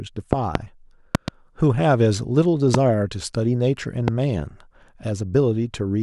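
A sudden voltage spike, likely from a switch, plug or static discharge, causes loud pops about 20 dB above the speech: double pops at 0.33–0.58 and 1.15–1.30 s, single ones at 2.74–2.77 and 4.08–4.10 s (the last about 15 dB), with speech continuing beneath.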